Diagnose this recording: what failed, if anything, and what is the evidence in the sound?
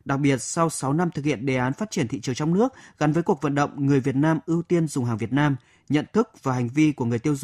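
Nothing failed in this speech recording, and no stage of the chain leaves an audible mark. There is no event in the sound to time or to trace back to a mechanism.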